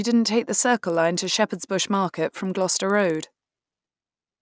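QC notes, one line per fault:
0.6–4.41 s, resampler restarted on every block: each 50 ms block converted from 48 kHz to 16 kHz separately, leaving edge errors heard as ticks at 20 Hz.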